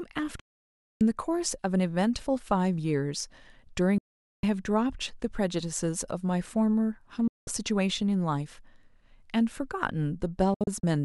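The speech has four digital broadcast dropouts, at 0.40 to 1.01 s, 3.98 to 4.44 s, 7.28 to 7.48 s, and a cluster of short holes from 10.54 to 10.84 s. Each time, the receiver lost good frames and muted with a quick fade of about 3 ms, so that stretch of the programme is simply gone.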